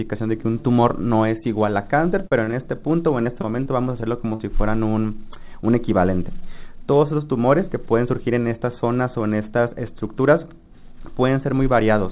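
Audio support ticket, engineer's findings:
Short concealed packet loss, 2.27–2.32 s, 2.44–2.48 s, 2.51–2.53 s. Jitter buffer/decoder concealment. Holes of about 40, 30 and 10 ms bridged by extending the prior sound, then blended back. Brief smears or wobbles, not silent dropouts, and isolated rather than sustained.

Repeated packet loss (robotic sound), 3.03–4.40 s. Same concealment firing nine times, longest gap 37 ms, about 11% of the stretch synthesized. Distinct from the earlier events: holes recur before the sound recovers, giving continuous choppy texture. Band-limited to 4 kHz, consistent with a G.711 mu-law call path.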